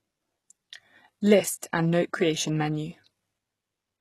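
A speech recording with plainly audible coding damage for its whole length: the top end stops dead at about 12.3 kHz, and the treble below that sounds synthetic rather than recorded, with s sounds coming out gritty and lispy. The likely cause is HE-AAC compression at a very low rate, consistent with roughly 16 kbps, where upper bands are rebuilt by copying lower ones upward, so harmonics no longer line up across the crossover.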